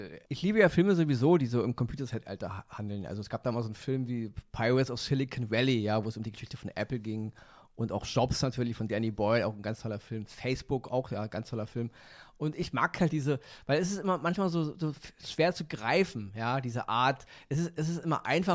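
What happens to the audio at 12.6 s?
Nothing goes wrong at 12.6 s; the speech carries on intact through that moment, with no dropout, click or distortion.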